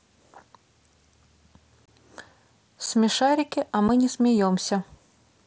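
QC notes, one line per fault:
1.86–1.88, 2.86 and 3.88 s: unconcealed Bluetooth headset packet loss. Dropped mSBC frames were left as hard-edged gaps. The first lasts about 22 ms, like three lost 7.5 ms frames.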